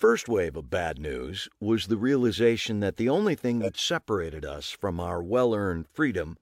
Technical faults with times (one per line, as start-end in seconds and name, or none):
3.61-3.75 corrupt frame decoded